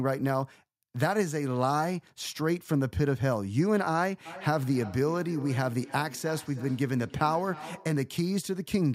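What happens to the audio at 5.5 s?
At 5.5 s the speech is caught in feedback echo between two devices, running from 4.26 s to 8.1 s. A second device in the room replays the call audio, the first device's microphone recaptures it, and each word returns roughly every 0.3 s, thinner and ringing, peaking at about 17 dB below the speech.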